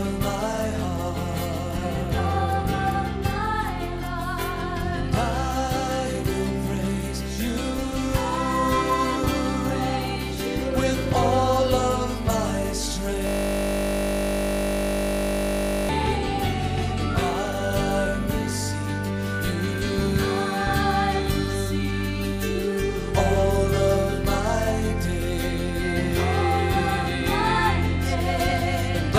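At 13.27 s there's a system hang loop running to 15.89 s. The machine or driver froze while the hardware kept replaying its ring buffer, so one 20 ms slice repeats over and over, which you hear as a steady 50 Hz buzz.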